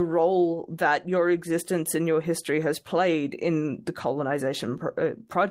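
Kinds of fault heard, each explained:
Nothing stood out on listening to this speech recording.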